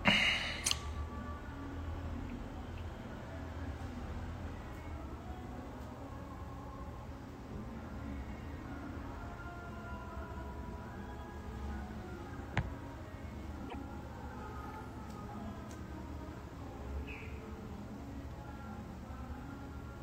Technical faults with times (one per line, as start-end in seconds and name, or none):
13.68-13.75 repeated frames